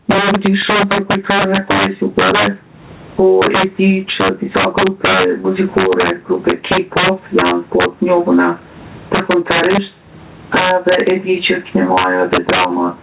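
Speech runs through the whole clip with integer overflow: loud peaks, driven about 8 dB past full scale, wrap to the opposite sign, producing violent cracks on a few percent of samples. Gain pumping is also present throughout, with the gain swinging by roughly 20 dB, likely from excessive input gain fought by a fast limiter. Sound above 4 kHz is missing, which fits a G.711 call path.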